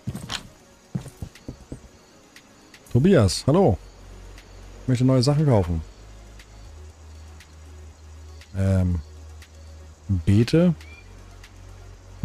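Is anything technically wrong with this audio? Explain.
Yes. From 5.31 s to the end of the audio there is periodic clock jitter. Interference is modulating the converter's sampling clock at roughly 1 kHz, so every component of the sound gains sidebands spaced about 1 kHz above and below it, stronger on high-frequency content. It is heard as a rough, metallic edge that disappears in silent moments. Unlike clipping distortion, which adds harmonics tied to the signal's own pitch, these sidebands keep a fixed spacing whatever is playing.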